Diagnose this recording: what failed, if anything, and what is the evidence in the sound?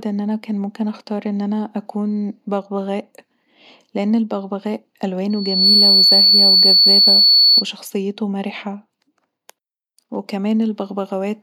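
Just after "لان البغبغاء", a pure whistle at 4.4 kHz rises out of the speech at 5.30 s, swelling to full strength within about half a second and sitting roughly 10 dB above the voice until it stops at 7.65 s. This is loudspeaker feedback squeal, a fault in the acoustic stage ahead of the converter. The microphone was hearing the loudspeaker it fed, and at 4.4 kHz the loop gain passed unity, so that one frequency kept regenerating.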